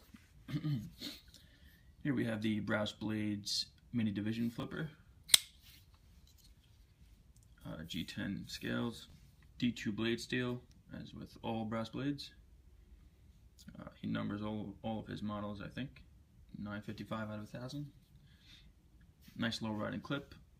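A 10 ms chunk of audio was delivered two chunks late, at 4.60 to 4.63 s and again at 9.10 to 9.13 s: chunks out of order. Each time the sound briefly jumbles, with three hard joins.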